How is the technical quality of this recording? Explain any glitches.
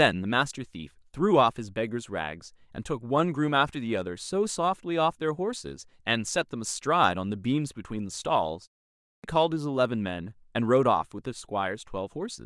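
One glitch stands out: a clipped start after a pause at 8.92 s. After a 0.33 s gap, the output wakes too slowly and swallows about 0.32 s, so speech bursts in without its opening sounds. Keeping the output awake through pauses would lose nothing.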